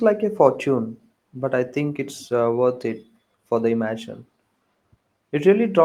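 No technical faults can be heard anywhere in the recording; the signal stays continuous and stable throughout.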